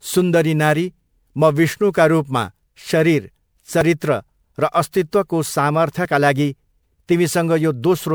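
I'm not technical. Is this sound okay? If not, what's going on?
No. Throughout the speech there is generation loss: the sound has a swirly, watery texture, a hollow, thinned-out quality, and the starts of sounds are blurred rather than crisp. The likely cause is that the recording was saved as an MP3 about four times over. Each round of compression discards a little more detail in slightly different places, so the small errors pile up into the smeared, hollow character you hear.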